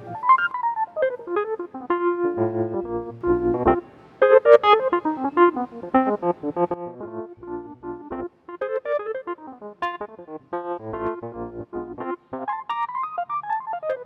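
A step in digital gain, likely applied without any ramp, causes a sudden gain jump at 0.51 s: the sound and its background noise drop together by about 6 dB until 3.21 s. At 6.74 s a second jump cuts the level by about 13 dB through to the end.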